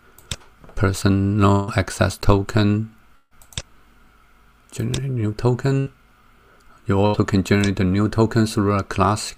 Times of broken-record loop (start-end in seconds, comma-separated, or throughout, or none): none